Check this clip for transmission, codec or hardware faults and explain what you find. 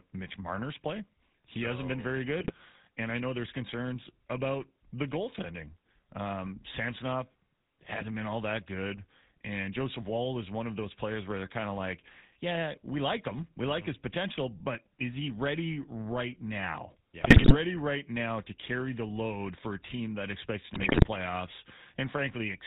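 The speech carries two faults: GSM full-rate coding throughout, and GSM bit errors in three short bursts.

GSM full-rate codec, throughout: the speech is band-limited to 4 kHz and has a clearly audible buzzy, gravelly roughness. A vocal-tract filter is driven by a sparse, regularly spaced pulse excitation, consistent with the 13 kbps full-rate coder.

GSM bit errors, at 2.4–2.53 s (after "so hasn't been very"), 17.2–17.56 s (between "he ready right now" and "right now to carry") and 20.74–21.08 s (after "team that expects to"): corrupted filter, pitch or gain parameters distort the spectrum and level frame by frame, producing squawks, pops and gargling. The later two bursts are longer and have higher bit error rates.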